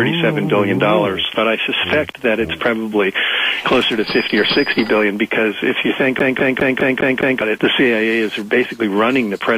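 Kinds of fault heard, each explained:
CD stuck on one turn: from 6.19 s to 7.42 s the sound breaks into a fast, even stutter, the same fragment of about 0.2 s playing six times over with a brief mute at every jump, so it ticks along at roughly five repeats a second before normal playback resumes. This is a skipping disc: a scratch knocks the laser back one track at the same point on each rotation, replaying that short stretch until it escapes.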